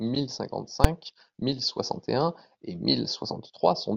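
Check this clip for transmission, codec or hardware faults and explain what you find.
One fault, in speech: at 0.84 s, just before "mille soixante et un", a single very loud bang is heard. This is invalid numbers at full scale: infinite or invalid values were pinned to maximum level for about 5.3 ms, which fits a 256-sample block.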